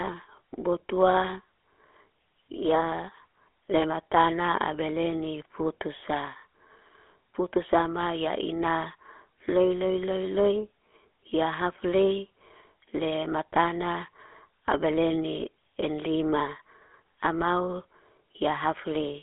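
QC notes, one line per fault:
Throughout, GSM full-rate codec: the speech carries a buzzy, gravelly roughness, plainly audible, because the codec rebuilds it from a vocal-tract model excited by evenly spaced pulses that keep only every third excitation sample, discarding the fine detail between them. The band sits within roughly 300 Hz to 3.4 kHz, so the low body and the upper sibilance are gone. This coarse character fits the original 13 kbps GSM coding.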